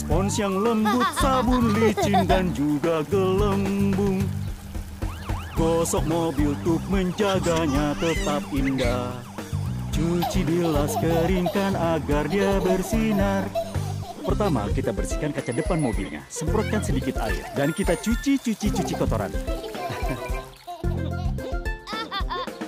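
No dropouts, clipping, glitches or other technical faults turn up anywhere in the clip.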